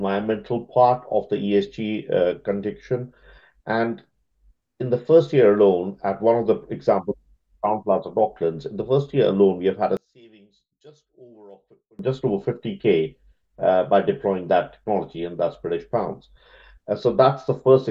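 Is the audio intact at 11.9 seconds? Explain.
No. From 9.97 to 11.99 s, one channel inverted is the likely cause: one side's polarity is flipped, so when the channels sum to mono their shared content cancels. The sound drops by about 29 dB, leaving only a faint residue.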